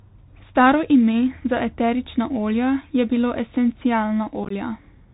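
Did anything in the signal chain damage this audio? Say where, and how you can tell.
Yes. The Bluetooth CVSD headset codec, at the codec stage, shapes the entire clip, and it is plainly audible. The speech is narrowband with nothing above 4 kHz, s sounds come out scratchy, and a granular hiss sits under everything. CVSD sends one bit per sample, each saying only up or down, with an adaptive step. Loud high-frequency content outruns that step and distorts. The damage fits a 64 kbps CVSD link.

Unconcealed Bluetooth headset packet loss on the radio link hits between 4.44 and 4.52 s. About 41 ms of audio drops out in scattered gaps across roughly 68 ms, and the longest single hole is 18.8 ms. That pattern fits around ten lost packets. Silence or an idle pattern fills the gaps, so the holes have hard edges. The speech comes back briefly quieter as the CVSD step size recovers, which gives a short chopped, crackly stretch.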